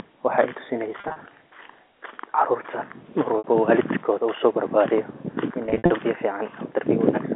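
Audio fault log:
1.00–1.16 s, 3.38–3.44 s (just before "walidkoda usobarbariye in"), 5.66–5.90 s (just after it): packet loss with pitch repetition. About 100, 60 and 160 ms go missing, filled by repeating the last pitch period, which gives a held buzz. The waveform shows identical copied cycles, and a spectrogram shows frozen, flat harmonics.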